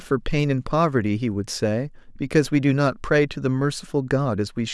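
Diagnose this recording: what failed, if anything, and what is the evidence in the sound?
Nothing failed: no stage of this recording's path leaves any audible evidence of a fault.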